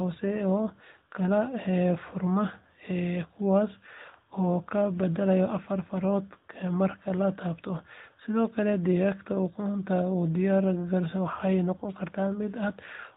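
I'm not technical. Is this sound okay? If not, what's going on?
No. All the way through, the speech sounds like an old mobile phone call: thin, muffled at the top, and plainly buzzy and artificial. That comes from the AMR narrowband mobile codec, which discards everything above about 4 kHz and rebuilds the voice from a simplified model.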